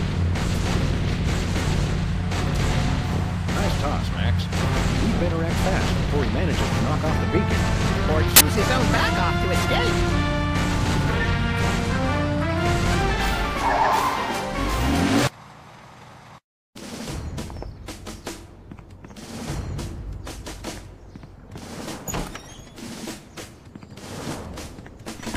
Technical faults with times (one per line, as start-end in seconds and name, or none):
8.36-8.41 uninitialised buffer